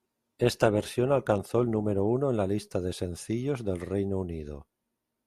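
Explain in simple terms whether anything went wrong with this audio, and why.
The player began on a low-quality version of the stream, an adaptive stream starting at a low bitrate, so until 2.0 s the speech sounds dull and smeared, then suddenly clears.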